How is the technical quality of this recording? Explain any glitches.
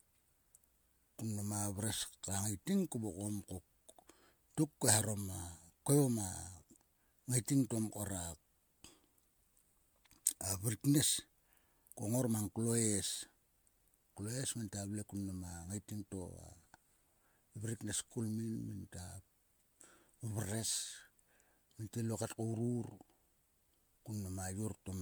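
The speech has been through repeated lossy coding, with generation loss running for the whole clip. The likely cause is the audio being decoded and re-encoded as MP3 about four times, each pass at a rate that fits roughly 130 kbit/s. Every round quantises again on a shifted frame grid, so small errors and spectral gaps stack up. The result sounds swirly and hollow, consonant attacks are softened and smeared, and there is no content above about 20.1 kHz.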